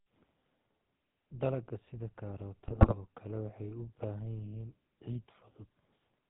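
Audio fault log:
throughout: GSM full-rate codec. The whole clip carries the buzzy, gravelly roughness of the original GSM speech coder, and the damage is plainly audible. The codec rebuilds speech from a vocal-tract filter driven by a sparse, regularly spaced pulse excitation that keeps only every third sample, so the texture grinds rather than flows. Nothing above 4 kHz survives, leaving the sound dull and band-limited. The coarseness fits a 13 kbps full-rate stream.
2.68–2.95 s: GSM bit errors. For roughly a quarter of a second the speech breaks into squawks, pops and gargling. This points to a weak radio link letting corrupted bits through to the decoder across about a dozen frames. Where errors land in the filter, pitch or gain parameters, each affected frame is decoded with a warped spectrum or a sudden jump in level, which produces the harsh, unstable bursts.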